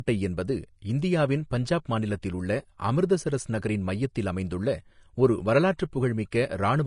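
Speech with plainly audible Vorbis compression damage throughout: nothing is present above 10.6 kHz, and the remaining treble sounds hissy and grainy, with roughened tones and smeared attacks. The likely cause is coarse quantisation of the upper residue, consistent with a bitrate around 37 kbps.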